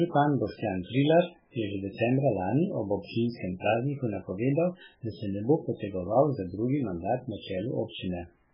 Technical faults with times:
0.00-8.54 MP3 compression

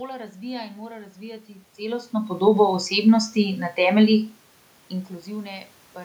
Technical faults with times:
1.46-2.79 automatic gain rising

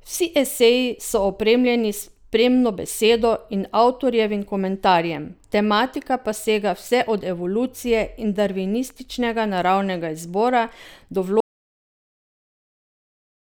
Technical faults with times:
11.40-13.46 audio dropout to silence

